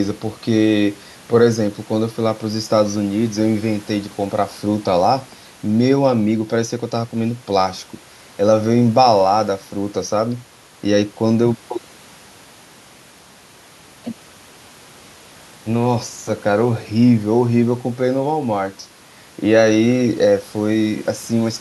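Nothing stood out on listening to this speech recording.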